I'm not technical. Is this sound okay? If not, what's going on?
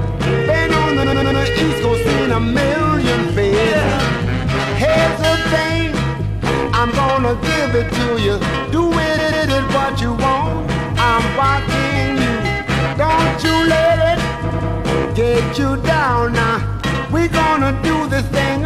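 No. There are repeated frames: a short slice of audio, about a tenth of a second or a bit more, replays two to four extra times, heard as a stutter at 1.02 s, 9.17 s and 14.49 s.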